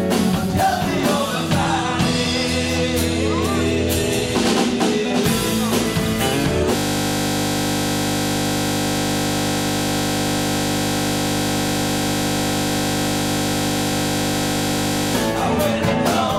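System hang loop from 6.76 to 15.15 s: the system froze while the hardware kept replaying one 20 ms buffer, producing a steady 50 Hz buzz.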